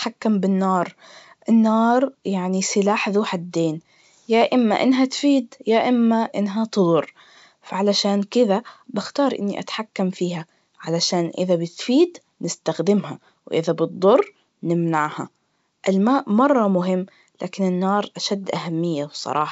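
No technical faults occur at any point in the speech, which is carried over G.722 wideband telephone coding at 64 kbit/s.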